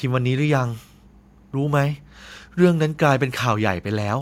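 No technical faults are audible.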